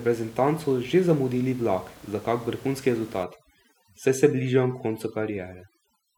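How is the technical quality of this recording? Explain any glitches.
The recording has one clear fault in its second half. Up to that point, a room noise sits about 24 dB below the speech. From 3.24 s to the end, there is overdone noise removal. A noise reduction process is set far too strong. It pushes individual frequency bands down hard whenever they sit close to its noise estimate. Quieter parts of the speech fall below that line and vanish with the noise. The background drops and breaks up into small twinkling specks.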